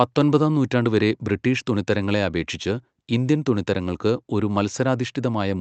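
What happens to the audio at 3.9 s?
Nothing goes wrong at 3.9 s: the speech passes through intact, with only the steady band-limited character of the Opus call path that runs under the whole clip.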